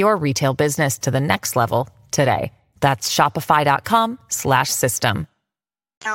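A speech recording with nothing technically wrong with it to report at any point.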